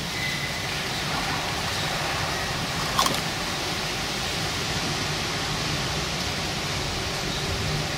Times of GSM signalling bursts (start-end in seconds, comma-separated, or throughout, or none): none